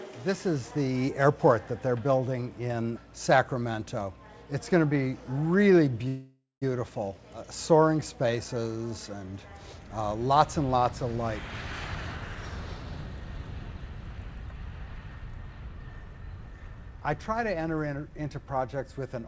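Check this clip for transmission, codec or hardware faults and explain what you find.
Three transmission faults are audible, all from the network side of a call path whose audio is band-limited to 8 kHz, consistent with a wideband codec such as G.722.

Call audio freeze, 6.08 to 6.64 s: the sound holds on as a fading buzz for about 0.54 s, including roughly 160 ms of near silence, then resumes where it left off. The likely cause is delayed packets draining the jitter buffer, so the gap is inserted and nothing is lost.

Skip ahead, 12.35 to 12.37 s: playback jumps forward abruptly with almost no gap, and around a tenth of a second of audio is missing. Later packets were already queued, so the dropped stretch was discarded and the two sides were spliced nearly directly.

Jitter buffer speed-up, 13.92 to 16.92 s: the audio runs at 104% speed with unchanged pitch. The buffer held excess audio, so the receiver trimmed short pitch-period segments repeatedly, removing roughly a tenth of a second in total.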